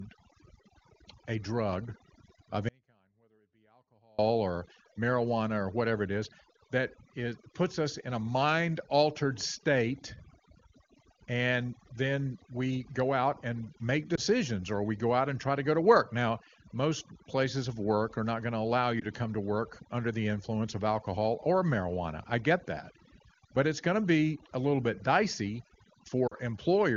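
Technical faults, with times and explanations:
Throughout: overdone noise removal. Background drops and breaks up into twinkling specks; quiet parts of the voice are pulled down with it.
2.69 to 4.19 s: audio dropout to a faint residue. After "a drug of" the speech cuts abruptly for 1.5 s, leaving only a faint trace about 35 dB down, likely a signal break with the path still live, until "or marijuana or whatever".
14.15 s, 18.99 s and 26.27 to 26.35 s: lost AMR speech frames. Single 20 ms losses after "go out and make" and "not going to allow" give brief dips or warbles, and a later 40 ms pair sinks toward near silence, as the decoder repeats old parameters at falling gain. The AMR wideband codec at 23.85 kbit/s underneath adds little audible coloration.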